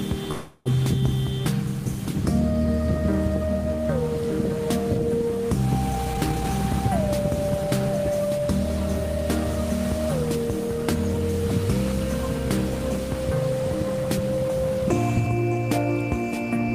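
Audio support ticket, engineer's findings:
0.31–0.68 s: last sound stretched into a fading buzz, then audio resumes where it stopped. Likely call audio freeze, jitter buffer underrun, about 340 ms of delay inserted, nothing lost.

5.93–6.47 s and 7.68–8.60 s: audio hurried, pitch unchanged, up to 139% then 105% speed. Jitter buffer speed-up trimming pitch periods, roughly 200 ms and 50 ms removed.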